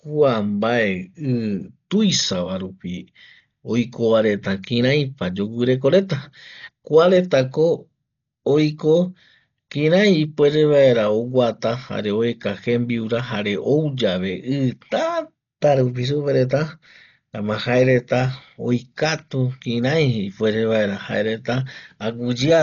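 Throughout the speech, nothing reaches above 7 kHz and the sound is dull, with a rough, fluttering noise around voiced tones. This is likely heavy Dolby Digital compression at a bitrate fitting about 40 kbps. Lines left without bits are filled with dither noise, which a plain low-pass filter wouldn't add.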